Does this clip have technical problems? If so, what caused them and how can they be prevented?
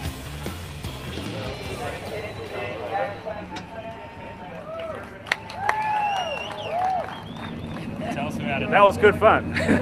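Yes. Short concealed packet loss at 8.85 to 8.91 s: about 40 ms of audio arrived too late for the decoder, which filled the gap by extending the preceding sound, pitched or noise-like, then blended back into the real signal. A more stable network path, or a larger jitter buffer, would prevent it.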